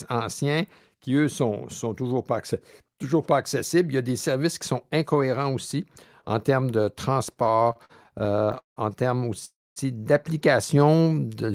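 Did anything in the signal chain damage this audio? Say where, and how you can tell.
Yes, and it's all on the receiving end of a network call: the jitter buffer is struggling. From 7.29 to 8.78 s, right after "aussi en termes de", you get repeated stalls (stutter), about two dozen little hangs where the last sound gets stretched out, the longest around 173 ms. Roughly 450 ms of that 1.5-second stretch is filler, about 30%. Packets were arriving slower than playback, so the buffer kept draining and the receiver bridged each hole. Nothing's lost, it just drags.

Then at 9.45 s, just after "en termes", there's a freeze lasting to 9.78 s. The last sound hangs on and fades, then about 230 ms of near-silence, and the audio resumes exactly where it stopped. About 310 ms has been inserted and nothing is missing, which points to a call audio freeze, likely packets held up in transit until the buffer ran dry and the playout delay grew by that same 310 ms.

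Last, from 10.79 to 11.53 s there's a jitter buffer slow-down. Playback drops to about 85% speed but the pitch stays put, so things sound drawn out, with about 121 ms added overall. The receiver was rebuilding its reserve by repeating single pitch periods and bits of pause over and over. That produces exactly this stretched, slightly sluggish quality rather than an audible gap.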